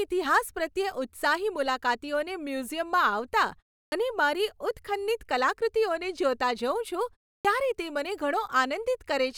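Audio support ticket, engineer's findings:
Clipped start after a pause, 3.88–3.92 s: onset of "અને મારી ઉત્ખન્નિત કલાકૃતિઓને" cut by 40 ms after a 0.34 s gap. Output device sleeping in silence, slow to wake.

Same fault, 7.41–7.45 s: 37 ms missing before "ત્યારે તે મને" after a 0.33 s gap.

Distinct from muted pauses (background drops, resumes in time). These gaps swallow the first sounds themselves.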